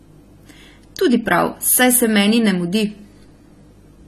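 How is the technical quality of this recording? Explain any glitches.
The recording carries plainly audible codec damage from start to finish. Throughout the speech, nothing sits above about 13.7 kHz, and the top end sounds dull and smeared with a fizzy, warbly edge on sibilants. That's likely AAC compression, with the encoder starving the highs at a low bitrate, something around 32 kbps.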